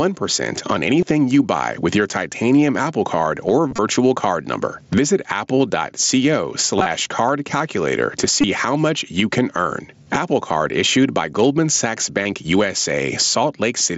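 Gain pumping runs through the whole of this speech recording: the gain swings by about 15 dB as loud sounds come and go, so loud and quiet passages sit unnaturally close in level and the delivery sounds squashed. The likely cause is input gain set far too high for the microphone, with a fast limiter or compressor clamping down on each loud syllable and releasing in the gaps. Concealed Bluetooth headset packet loss breaks up the audio at 1.01 s, 3.68–3.79 s, 5.59 s, 6.77–6.86 s, 8.41–8.44 s, 10.03–10.06 s and 12.23–12.25 s. The headset link drops short blocks, and the receiver fills each hole by repeating the best-matching recent stretch of waveform. The brief gaps at 1.01 s and 5.59 s are about 15 ms and 7.5 ms, and the single 7.5 ms loss at 5.59 s is barely noticeable. The longer patches at 3.68 s and 6.77 s, about 75 ms and 52.5 ms of missing audio scattered over roughly 105 ms and 90 ms, produce a brief buzzy, held tone and a small warble as real sound resumes. 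The gap lengths step in 7.5 ms units, which fits mSBC framing. The wideband mSBC link itself carries speech up to 8 kHz with only light graininess.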